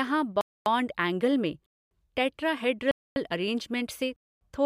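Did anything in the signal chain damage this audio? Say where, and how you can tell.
Yes, there's a gap between chunks, and it comes in at the streaming or playback stage where the audio gets delivered in pieces. You hear four clean 250 ms holes with hard edges, at 0.41–0.66 s, 1.66–1.91 s, 2.91–3.16 s and 4.16–4.41 s. That's one every 1.25 s, which fits 1 s chunks with a quarter-second of silence wedged in at each join. The first hole lands just before "एंगल में", the second right after it, and the third just before "अरेंजमेंट से". Nothing seems to be missing; the speech just stalls at every boundary.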